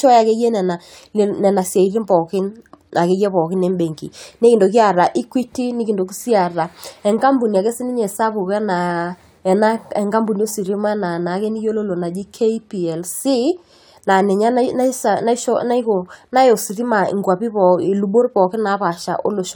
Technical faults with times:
none

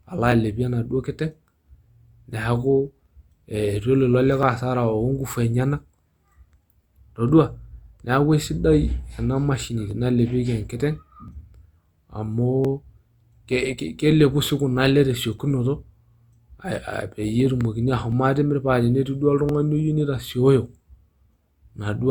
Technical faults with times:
0.32-20.86 clock drift buffer slips

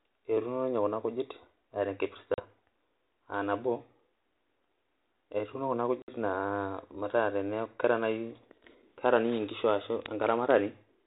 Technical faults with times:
2.34-2.41 packet loss on an ADPCM call
6.02-6.09 packet loss on an ADPCM call

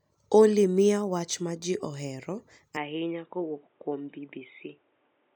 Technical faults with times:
2.77-5.36 input switched to a poorer device

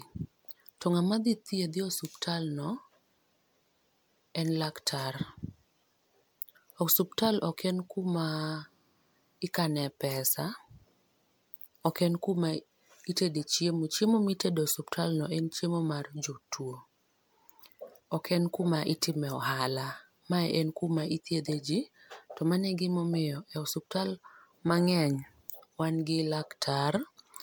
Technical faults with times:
0.00-27.43 generation loss

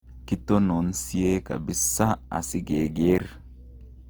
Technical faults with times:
0.00-4.09 Opus compression

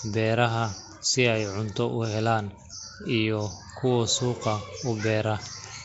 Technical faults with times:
0.00-5.84 Nellymoser compression

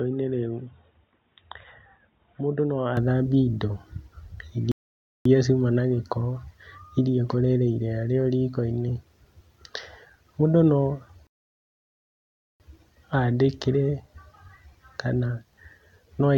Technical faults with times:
0.00-2.97 input switched to a poorer device
4.72-5.25 rebuffering stall
11.27-12.60 rebuffering stall

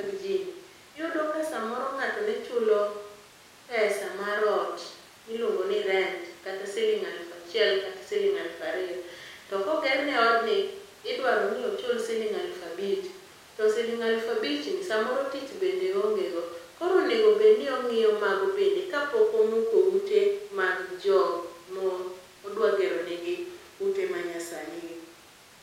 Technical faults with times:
none

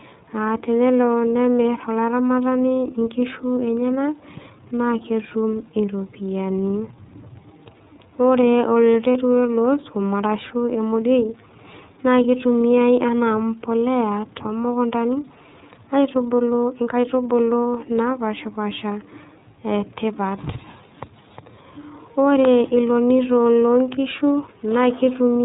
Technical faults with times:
0.00-25.45 iLBC codec
9.12-9.15 lost iLBC frames

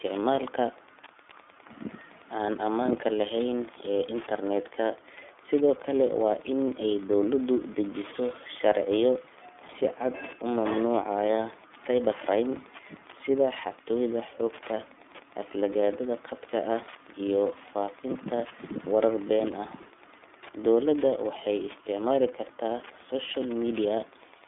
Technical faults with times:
0.00-24.47 iLBC codec

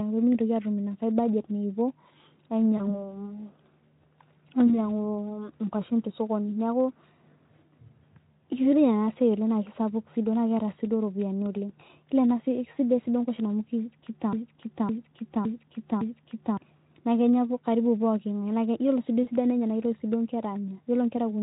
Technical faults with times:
2.77-3.02 VoIP packet loss concealed by the speech codec
4.67-4.89 VoIP packet loss concealed by the speech codec
14.33-16.57 broken-record loop
19.23-19.30 VoIP packet loss concealed by the speech codec

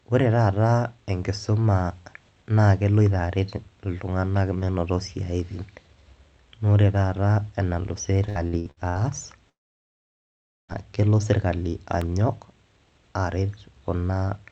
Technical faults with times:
8.29-8.98 repeated packet loss (robotic sound)
9.49-10.71 long network dropout
12.01 block of digital silence

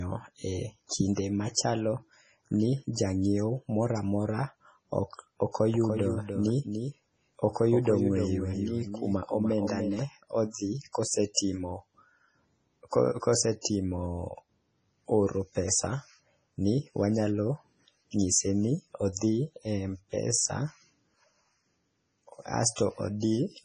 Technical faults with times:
0.00-23.65 MP3 compression
5.74-10.02 doubled audio track
18.19-18.21 pre-echo
19.12-19.17 pre-echo

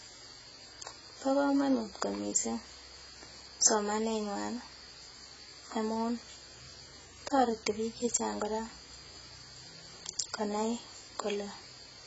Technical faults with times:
0.00-12.07 AAC compression

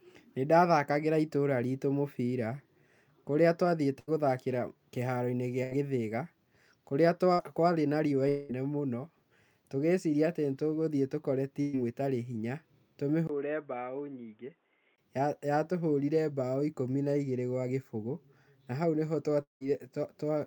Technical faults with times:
3.99-4.09 burst of packet loss
5.63-5.73 burst of packet loss
7.33-7.41 burst of packet loss
8.29-8.51 long network dropout
11.61-11.75 burst of packet loss
13.27-14.98 input switched to a poorer device
19.43-19.62 long network dropout

